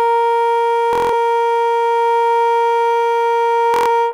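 Wireless packets were lost twice, a Bluetooth stutter, so the receiver kept replaying its last short slice of music. This gives a buzzing machine-gun repeat from 0.93 to 1.13 s and from 3.74 to 3.89 s, then the music jumps ahead.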